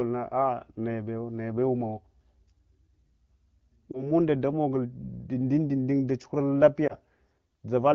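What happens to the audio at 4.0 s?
Around 3.91 to 4.04 s, just before "damogul dundundun dachuhurul", you hear lost AMR speech frames: sounds like a single frame concealed by the decoder, giving a brief dip or warble.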